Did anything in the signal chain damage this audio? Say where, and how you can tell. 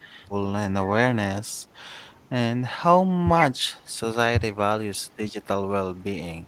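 Yes. Speech suppressed in double talk appears at 0.22 to 0.30 s, 4.32 to 4.56 s and 5.41 to 5.45 s. These are brief level dips of roughly 10 dB at the first and last points. The middle one cuts deeper, around 25 dB, for about a fifth of a second. The stage is call processing. The likely cause is an echo canceller that, with both ends talking at once, mistook this talker for loudspeaker echo and turned the speech down with it.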